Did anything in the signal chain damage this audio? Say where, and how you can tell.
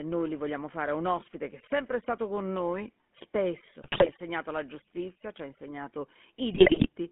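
Yes. GSM full-rate codec damage runs through the whole recording, a codec-stage fault. Speech is confined to roughly 200 Hz to 3.4 kHz and carries a plainly audible buzzy, gravelly roughness. This comes from the vocal-tract model being driven by sparse, regular pulses, which fits the 13 kbps full-rate coder.

GSM bit errors, a network-stage fault, hit at 3.82 to 4.11 s and 6.52 to 6.88 s. The speech there breaks into squawks, pops and gargling. Corrupted filter, pitch and gain parameters reached the decoder, distorting the spectrum and spiking the level frame by frame.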